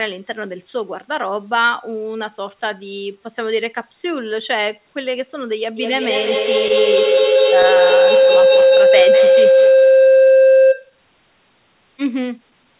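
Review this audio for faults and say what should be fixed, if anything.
A second device in the same room was on the call, so its loudspeaker fed back into the microphone with gain on every trip. From 5.77 s to 11.01 s this builds into a feedback howl near 500 Hz, pulsing roughly every 200 ms and peaking about 9 dB above the speech. To prevent it, keep only one device's audio active per room, or mute the other device's microphone and speaker.

Between 7.62 s and 9.28 s, about seven packets were lost or arrived late, and the receiver filled each hole by extending the preceding sound. The result is scattered short gaps: brief ticks and smears, the longest around 15 ms, adding roughly 70 ms of patched audio and stretching the timeline by 17 ms. To prevent it, stabilise the network path or give the jitter buffer more headroom.

Across the whole clip, nothing is heard above 4 kHz, which fits a G.711 A-law call path at 64 kbps.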